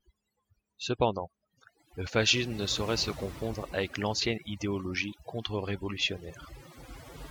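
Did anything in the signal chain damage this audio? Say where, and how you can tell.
Yes. Overdone noise removal runs throughout the speech, a call-processing stage. The background drops and breaks up into twinkling specks, because a suppressor set too strong cuts individual frequency bands near its noise estimate, taking quiet voice components with them.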